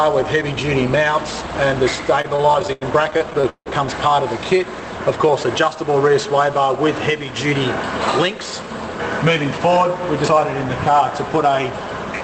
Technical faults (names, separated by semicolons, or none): repeated stalls (stutter)